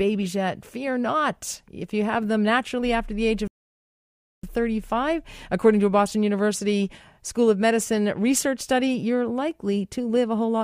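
The player most likely ran short of buffered data or had its output thread held up, causing a playback stall in this speech recording. From 3.48 s to 4.43 s the output drops to silence for about 0.96 s, cutting the speech off mid-flow with no fade. When audio resumes, it picks up again after that gap of dead air, which makes it sound like a hiccup in delivery rather than a natural pause.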